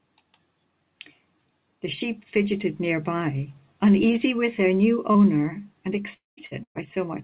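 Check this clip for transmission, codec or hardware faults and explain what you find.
The clip has three kinds of network fault, all in its last three seconds. The band stops at 4 kHz, which fits a G.711 mu-law call codec at 64 kbps.

Short concealed packet loss comes first, from 5.12 to 5.17 s. About 30 ms of audio never arrived in time. The receiver patched the hole by extending the preceding sound, either from its pitch or as shaped noise, for about 24 ms. It then blended back into the real signal. You hear a brief smear or wobble, and a quick sound there can go missing.

A long network dropout follows, from 6.13 to 6.40 s. The sound is a gap of about 240 ms. The first part is filled by the previous sound continuing as a fading buzz or hiss. Then roughly 160 ms of silence remains. The audio returns further on, with that stretch lost. The likely cause is the network delivering no packets for about a quarter of a second. 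Such a long hole goes far beyond what concealment can cover.

Two bursts of packet loss come right after. The first runs from 6.46 to 6.54 s and loses about 60 ms. The second runs from 6.63 to 6.78 s and loses about 120 ms. In each, several packets in a row were lost or arrived too late to play. The receiver held the last sound and turned it down as the gap went on. The first burst sounds like a short held buzz or fading hiss. The longer one ends in about 90 ms of silence before the audio resumes.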